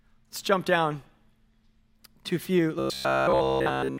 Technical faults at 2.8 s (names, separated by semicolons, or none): robotic sound from repeated short buffers